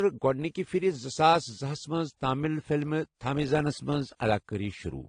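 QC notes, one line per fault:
Throughout: transcoding between lossy codecs. Nothing in the speech sounds above about 12.2 kHz. Dull, smeared detail from a heavily squeezed first encoding, consistent with a low-rate AAC stage near 32 kbit/s, sits under a second, cleaner-sounding layer of artefacts that fits a WMA pass near 96 kbit/s. The likely cause is that the later encoder spent its bits reproducing the earlier damage and added its own, while the lower band limit stayed in place.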